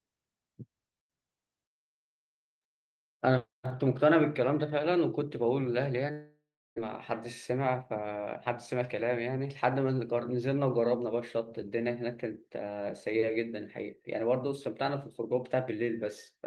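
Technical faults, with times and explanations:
6.11–6.80 s, long network dropout: the sound breaks off and is replaced by a fading buzz-like continuation of the last moment, then by silence for about 350 ms. It resumes at 6.80 s with roughly 600 ms of material simply gone. This is likely a stall in packet delivery, with the receiver concealing the gap by extending what it last had. The playback delay also shifts by around 50 ms.
7.52–7.97 s, jitter buffer speed-up: the speech runs about 9% fast (109% speed) while its pitch stays unchanged, giving a briefly hurried delivery. The receiver held more buffered audio than its target. To shed the excess it cut a series of very short, pitch-period-sized pieces, removing roughly 50 ms in total and bringing latency back down.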